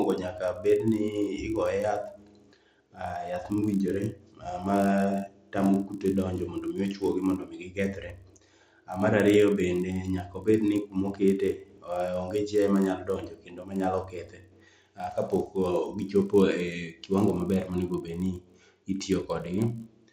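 Throughout the speech, a resampler restarted on every block converts 16 kHz to 48 kHz in 20 ms pieces, leaving an edge error each time. The result is a 50 Hz buzz riding on the voice, seen as evenly spaced vertical lines on a spectrogram and tiny periodic glitches in the waveform.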